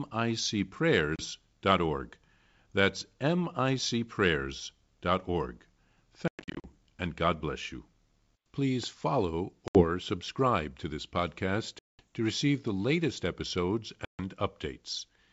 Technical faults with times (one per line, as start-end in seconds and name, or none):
1.16-1.26 packet loss on an ADPCM call
6.28-6.65 packet loss on an ADPCM call
9.68-9.85 packet loss on an ADPCM call
11.79-12.00 packet loss on an ADPCM call
14.05-14.21 packet loss on an ADPCM call